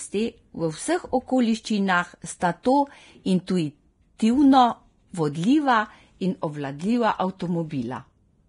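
Throughout the speech, nothing survives above about 10.6 kHz. The treble sounds hissy and grainy, and consonant attacks are blurred. This is likely Vorbis compression at a heavily reduced bitrate, near 30 kbps. Fine high detail has been replaced by coarse noise.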